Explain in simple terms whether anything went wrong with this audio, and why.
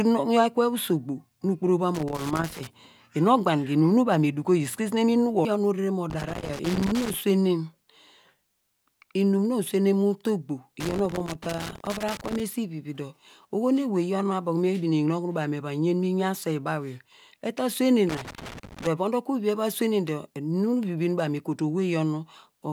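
Yes, something went wrong. Bursts of scratchy crackle cut into the speech at 1.9 to 2.7 s, at 6.1 to 7.1 s just after "nu orere mo", at 10.8 to 12.4 s just before "esi vivi dor oho", and at 18.1 to 18.9 s. This is loose connector crackle: a worn or dirty plug contact kept rapidly breaking and remaking the connection, chopping the sound into bits.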